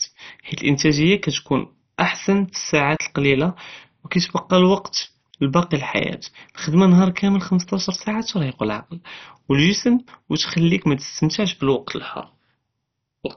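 MP2 compression throughout: nothing above 6.1 kHz, a dull, gurgling graininess, likely from bit-starved upper sub-bands switched off and coarse quantisation, which fits a 32 kbps stream.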